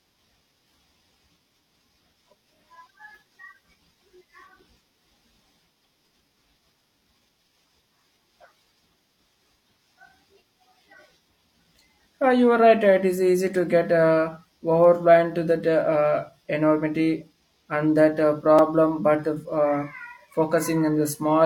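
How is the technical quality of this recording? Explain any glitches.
Two brief glitches affect this speech recording, one click and one short dropout.

At 14.84 s there is a single sharp click, likely from dropped samples: a couple of samples, well under a millisecond, are missing, so the waveform jumps abruptly to a later value. Nothing audible is lost, but the discontinuity produces a thin broadband tick.

At 18.59 s a gap between stream segments leaves a hard-edged hole of about 4 ms. The timestamps of adjacent segments, which fit 2-second segment lengths, don't meet, and the player fills the difference with silence. The sound briefly cuts out without losing any content.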